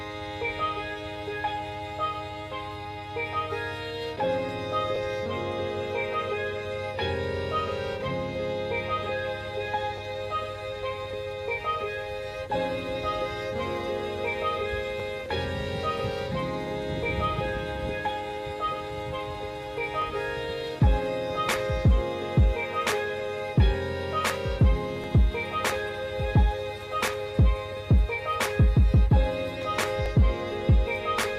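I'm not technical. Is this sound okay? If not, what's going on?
No. There's a click or stutter roughly every five seconds, at 4.96, 9.98, 15.0, 20.02, 25.04 and 30.06 s. This is overlapping chunks: the audio was handled in 5-second pieces that overlap slightly, so about 20 milliseconds plays twice at each join.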